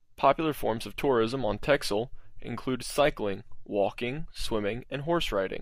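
Speech recording with no technical faults heard.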